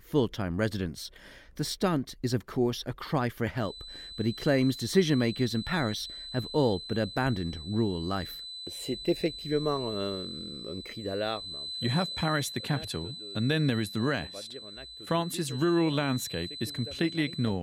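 From 3.53 s to the end there's a feedback whistle, a thin 4 kHz tone well under the sound, swelling and fading slowly, likely a loudspeaker-to-microphone loop sitting just short of runaway.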